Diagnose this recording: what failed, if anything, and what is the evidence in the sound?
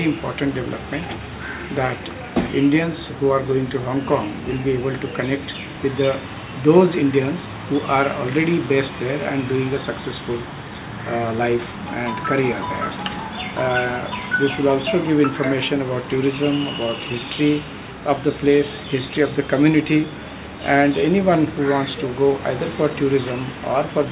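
Nothing failed anywhere here.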